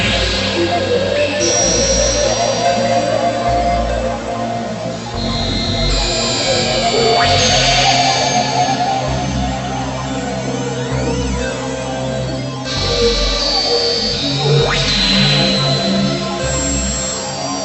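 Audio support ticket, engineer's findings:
No faults found in audio.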